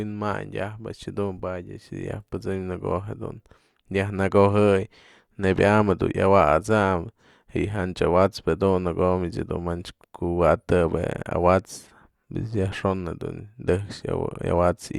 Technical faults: none

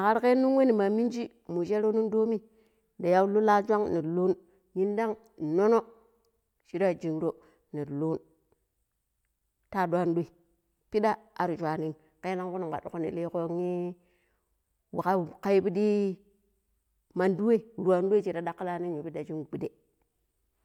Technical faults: none

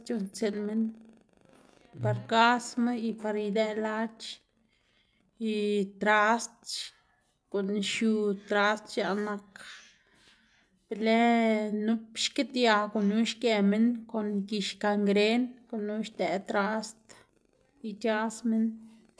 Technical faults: none

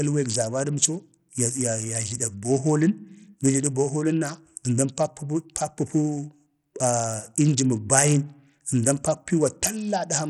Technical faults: Bluetooth SBC compression

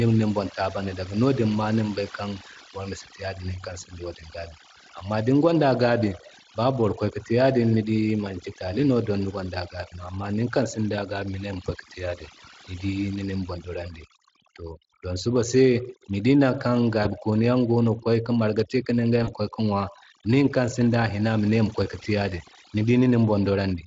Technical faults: overdone noise removal; VoIP packet loss concealed by the speech codec

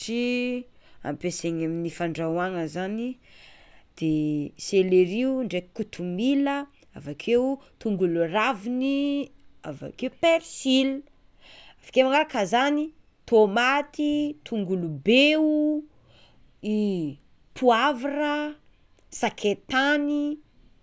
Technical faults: none

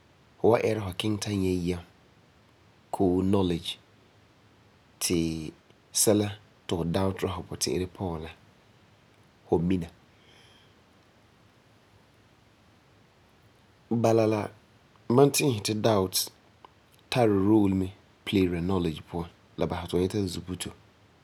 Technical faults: none

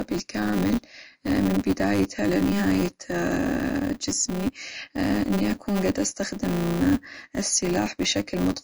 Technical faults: MP3 compression; filter restarted on every block

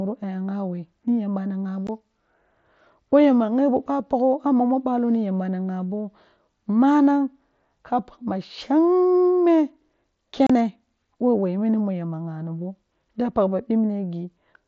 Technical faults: unconcealed Bluetooth headset packet loss

